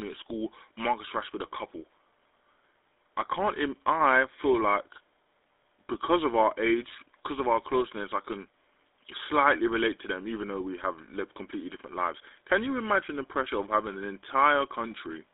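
GSM full-rate codec damage runs through the whole 15-second speech recording. The band sits between 300 Hz and 3.6 kHz, and the voice has a plain buzzy, gravelly roughness. That texture comes from the coder rebuilding speech from a vocal-tract filter driven by a sparse, regularly spaced pulse train, so fine detail in the excitation is thrown away. The thin, rasping quality fits the 13 kbps full-rate coder. GSM bit errors strike from 5.30 to 5.34 s, between "I feel like" and "because of our age", as a brief squawk and gargle. Corrupted bits reaching the decoder scrambled its filter, pitch or gain parameters, which warps the spectrum and jolts the level. The 40 ms burst fits about two damaged 20 ms frames from a weak radio link.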